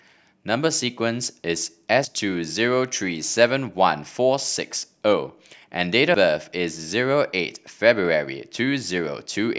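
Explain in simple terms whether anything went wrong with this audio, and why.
At 2.05 s and 6.14 s the speech jumps abruptly. Roughly 0.15 s is missing each time, with no gap. This is likely a dropped buffer (overrun): the recorder fell behind, and that stretch was overwritten before being saved.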